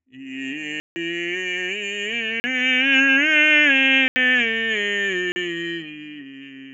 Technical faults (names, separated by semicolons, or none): noise suppressor applied to music or sounds; block of digital silence; sound cut by the noise suppressor